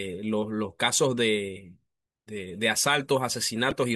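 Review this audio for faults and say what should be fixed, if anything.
A brief glitch breaks into the speech from 3.69 to 3.73 s. This is damaged data in the compressed stream: corrupted bytes there threw the decoder out of sync until it found the next valid frame header. To prevent it, verify file integrity with checksums and use error-checked transfer or storage for the compressed stream.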